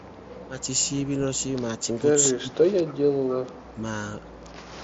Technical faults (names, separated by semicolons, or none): echo leak; speech suppressed in double talk